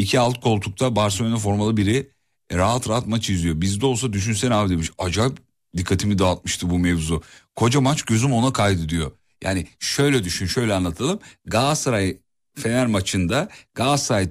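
No technical fault can be heard anywhere in the speech; the signal stays steady and intact throughout.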